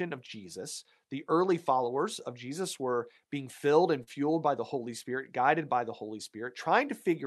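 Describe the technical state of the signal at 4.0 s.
Short concealed packet loss at 4.03 to 4.08 s: about 40 ms of audio arrived too late, so the decoder extended the preceding sound to fill the gap, leaving a brief smear.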